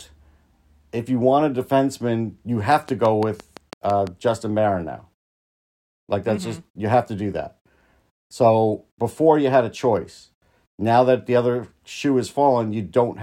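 From 2.72 s to 4.08 s, just after "want a defenseman you", a train of clicks runs over the speech: about ten sharp, near-identical ticks at a regular rate of about 5.9 per second, standing roughly 10 dB above the surrounding signal and audible in the gaps as well. The cause is likely electrical interference or a faulty connection or power supply injecting pulses. On a spectrogram they appear as evenly spaced thin vertical broadband lines; the waveform shows matching narrow spikes.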